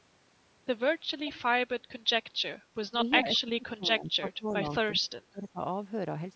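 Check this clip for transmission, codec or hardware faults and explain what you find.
Two kinds of fault are present, both pointing to a speakerphone echo canceller struggling on one side of the call.

Echo leak appears at 1.25 to 1.34 s and again at 4.49 to 4.55 s. A faint delayed copy of the speech returns 358 ms after the original, at about 20 dB below it the first time and about 30 dB below the second. The likely cause is a loudspeaker on one side whose canceller let part of the pickup through. It is then sent back as short scraps.

Speech suppressed in double talk occurs at 2.91 to 3.00 s, 3.22 to 4.66 s and 4.95 to 5.60 s. The speech level sinks by about 20 dB in the first two spans and about 30 dB in the last. In total that is roughly a tenth of a second, then about a second, then about half a second. The likely cause is both sides talking at once, so the canceller turned everything down. 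The talker dips and fades in pieces. The call's microphone processing leaves nothing above 8 kHz.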